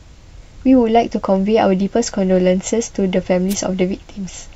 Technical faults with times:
3.49-3.55 wireless microphone noise hit

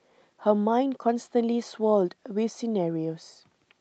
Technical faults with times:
none

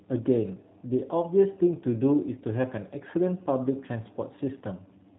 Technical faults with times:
0.00-5.18 G.729 codec

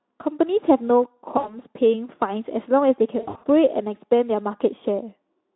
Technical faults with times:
1.37-1.58 VoIP packet loss concealed by the speech codec
3.19-3.46 VoIP packet loss concealed by the speech codec

